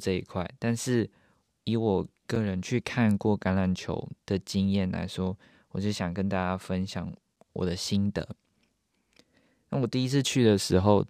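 A join between 5-second chunks left a gap between chunks at 2.35 s, 7 ms of silence heard as a brief, hard-edged hole in the speech.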